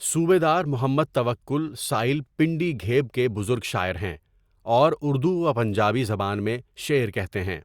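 Nothing in this recording stood out as a technical problem when listening.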